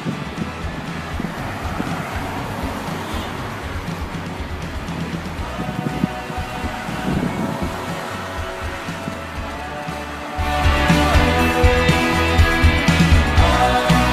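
At 9.91 s a GSM phone buzz kicks in for about 0.9 s: a steady, raspy 217 Hz rattle, about 22 dB down, from the handset's call bursts getting rectified.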